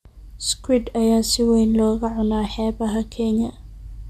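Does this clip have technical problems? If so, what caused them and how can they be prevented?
No, there are no technical faults to report in this speech clip. With nothing gone wrong in the recording or its playback, there is no cause to trace and nothing that needs preventing.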